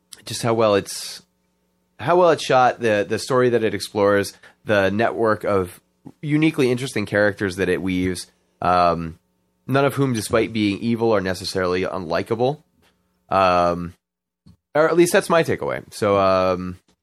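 Speech with a watery, swirly texture and dulled treble throughout, likely from MP3 compression at a bitrate around 64 kbps, where the encoder drops weak frequency lines. Brief chirps and blips are heard at 8.04 s, at 10.15 to 10.19 s after "um none of whom", at 13.13 to 13.18 s after "evil are necessarily unlikable" (very faint), and at 15.10 to 15.12 s after "or at least". These come from corrupt frames being decoded, with damaged data scattering energy into the wrong frequencies.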